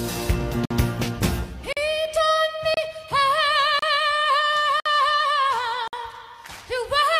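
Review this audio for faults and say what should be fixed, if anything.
Gaps between stream segments occur at 0.65–0.71 s, 1.73–1.77 s, 2.74–2.77 s, 3.79–3.83 s, 4.80–4.86 s and 5.88–5.93 s, each a hard-edged hole of silence lasting 28 to 56 ms. They recur about once a second, which fits 1-second segments whose timestamps don't quite meet, so the player pads each mismatch with silence. The sound resumes exactly where it stopped, so nothing is lost, only delayed. To prevent this, generate segment timestamps from a continuous sample count so each segment starts exactly where the previous one ends.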